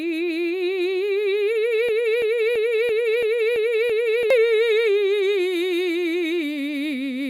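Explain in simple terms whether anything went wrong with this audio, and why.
The music gets stuck from 1.89 to 4.30 seconds. A piece about a third of a second repeats seven times in a row. This is a broken-record loop. The player likely stalled and replayed its last fragment. The music meant for that stretch is lost.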